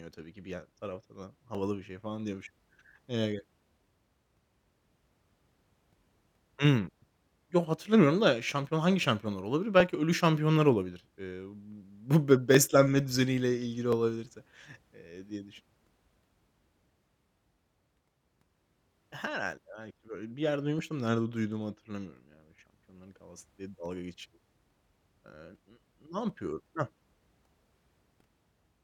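Two devices in the chain were likely running on separate clocks that disagree by around 500 parts per million, so the buffer between them drifts until a small block of a few dozen samples is dropped or repeated. These clock drift buffer slips recur every 1.38 s from 0.17 s to 27.67 s, about twenty in all. Each slip is a brief click or pop in the speech, arriving at that steady, metronome-like interval.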